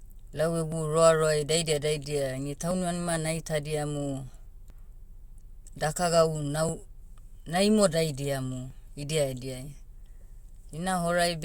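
Overlap between stream segments: the timestamps of adjacent 2-second segments overlap, so the player trims speech that was never duplicated, and the waveform jumps. Brief clicks or skips fall at 0.72, 2.71, 4.70, 6.69–6.71 and 8.70 s, the last just after "na imodaidiamu".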